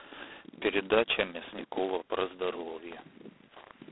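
G.726 ADPCM damage runs through the whole of this speech clip, from start to finish. The codec sends each sample as a few bits describing how far it strays from an adaptive prediction, and here the coarseness leaves a heavy, rasping hiss that rises and falls with the speech level, which fits the 16 kbit/s mode. The telephone line band spans roughly 300 Hz to 3.5 kHz, and nothing survives above 3.9 kHz.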